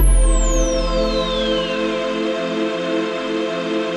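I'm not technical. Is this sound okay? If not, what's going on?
Yes, it's fine: nothing in it stands out as a technical problem, so there's nothing here you need to worry about.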